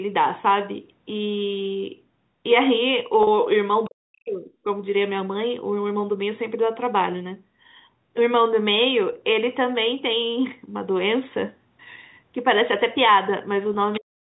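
Packet loss with pitch repetition hits at 3.23 to 3.27 s, losing 40 ms of speech. The receiver fills the gap by repeating the last pitch period, so the sound briefly holds on a slightly buzzy, stretched tone before continuing. From 3.86 to 4.65 s the voice dips sharply, by around 40 dB at its deepest. This is speech suppressed in double talk, likely caused by the echo canceller mistaking the talker for loudspeaker echo while the far side spoke, and turning both down. The same pitch-repetition concealment returns at 9.13 to 9.15 s for a 20 ms loss and at 13.74 s for a 10 ms loss, each a short held buzz. Suppression strikes again from 13.97 s to the end, turning the closing speech down by around 40 dB at its deepest.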